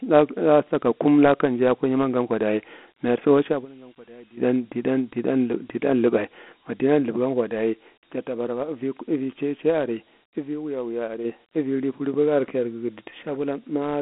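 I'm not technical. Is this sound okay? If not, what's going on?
No. The whole recording sounds thin and boxy, like a call through a phone menu, with a gritty hiss trailing the speech. Nothing is heard above about 4 kHz, so there's no crispness or air. This is Dialogic VOX ADPCM, the compact format used for voicemail and phone systems. It saves space by storing each moment of sound very roughly, and that coarse rounding is what you hear as grit. It also discards the higher frequencies entirely.

Twice a piercing whistle rises out of the speech. The first runs from 3.06 to 4.48 s and swells to full strength in under a second. The second runs from 9.67 to 11.46 s, builds over about a second, and is noticeably louder. Both are the same high pitch, around 5.7 kHz. This is a loudspeaker feedback squeal: a microphone picked up the speaker it was feeding, and one pitch kept looping round, growing each pass until something held it back.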